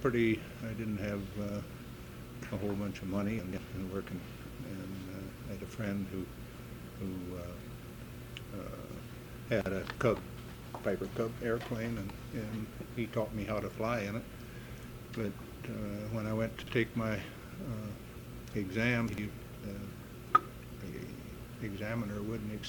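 Chunks out of order at 3.39–3.58 s and 9.47–9.66 s (a 46 ms chunk played three chunks late) and at 16.63–16.72 s and 19.09–19.18 s (one chunk late). Each gives a brief jumbled moment with hard joins; unlike a dropout, no audio is missing, only misplaced.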